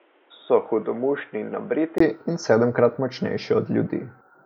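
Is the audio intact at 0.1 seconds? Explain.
No. At 0.1 s the speech is in a span running from 0.00 to 2.00 s that sounds like it came from a poorer device, likely the input switched to a poorer device such as a headset's call profile. It is dull and boxy, with nothing above 3.8 kHz, a little quieter, and carries a different noise floor well below the speech. On a spectrogram the energy stops sharply at 3.8 kHz until 2.00 s, where a 20 ms gap shows in the waveform before the fuller band returns.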